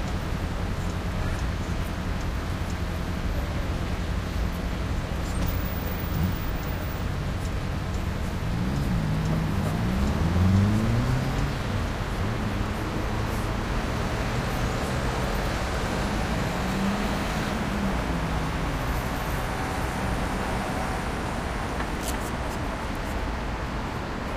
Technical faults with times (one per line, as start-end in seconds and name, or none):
10.03-10.06 loud pop